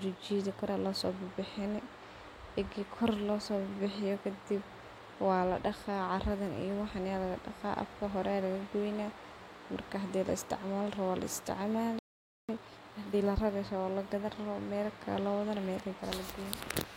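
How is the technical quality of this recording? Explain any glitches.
There are two linked glitches in the speech, both in the same second or so, each pointing to a hiccup on the playback side.

At 11.99 s there's a playback stall: the audio cuts out dead and stays silent for about half a second, until 12.49 s. The likely cause is the player running dry on data or its thread getting blocked for a moment, so nothing reached the output. Then the speech resumes.

Straight after, from 12.49 s to 13.47 s, you get time-compressed catch-up. The player is clearing the backlog the stall built up by snipping out tiny slices and cross-fading over the joins, so the speech runs at about 1.5 times normal speed while the pitch stays put. It sounds rushed, and then it settles back to normal pace.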